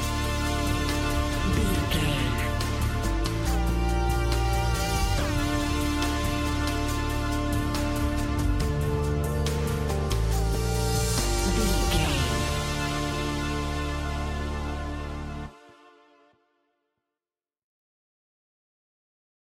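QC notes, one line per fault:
Nothing to log here; no faults turned up anywhere in the audio.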